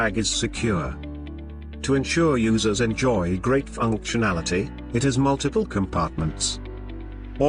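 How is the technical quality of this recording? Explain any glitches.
No technical faults can be heard anywhere in the recording, and the signal stays intact and continuous throughout.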